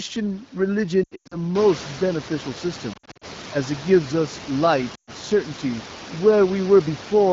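Lost AMR speech frames break up the speech at 1.03–1.37 s, 2.93–3.25 s and 4.96–5.11 s. The decoder repeated the last pitch and spectral shape at falling gain, so the sound warbles and fades. A spectrogram shows frozen, dimming harmonic bands, and the waveform envelope sags.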